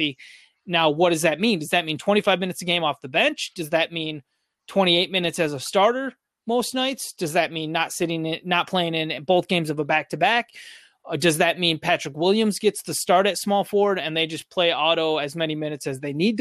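Right through the speech there's a dull, gurgling, grainy quality, with the top end thinning out and fluttering in and out. That's likely MP2 compression starved of bits, which fits a rate around 80 kbps: upper sub-bands get switched off and the remaining ones coarsely quantised.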